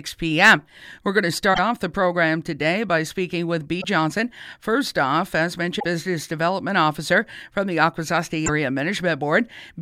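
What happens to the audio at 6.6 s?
Nothing goes wrong at 6.6 s; the audio plays through that moment intact, with no dropout, click or distortion.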